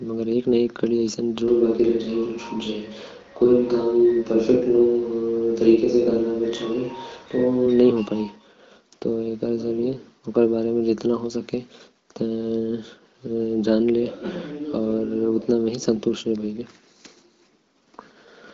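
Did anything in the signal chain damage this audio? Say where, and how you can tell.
Yes, at capture. From 1.48 to 7.66 s the speech abruptly turns roomy and hollow with thinner bass, at about the same level, and room noise rises to roughly 30 dB below the speech. The likely cause is a switch to a distant microphone, replacing the close one.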